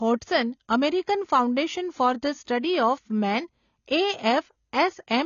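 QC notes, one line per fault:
Throughout: AAC compression. The speech is dull and smeared with plainly audible codec damage, as coarse quantisation of each frame's frequency lines fits a bitrate around 24 kbps, likely from AAC-LC encoding. A spectrogram shows a hard ceiling at 7 kHz.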